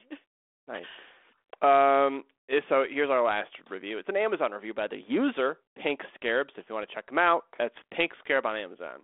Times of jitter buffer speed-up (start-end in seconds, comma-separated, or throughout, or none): none